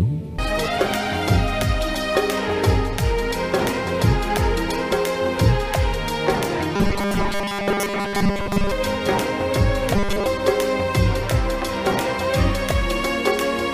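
Robotic sound from repeated short buffers at 6.76–8.71 s and 9.95–10.26 s: a rigid 200 Hz buzz, likely from a 5 ms chunk replayed over most of the real audio.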